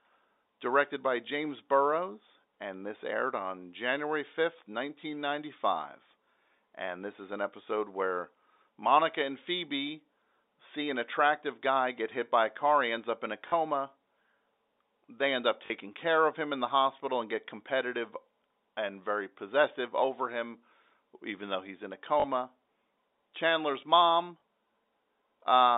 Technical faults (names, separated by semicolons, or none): packet loss with last packet repeated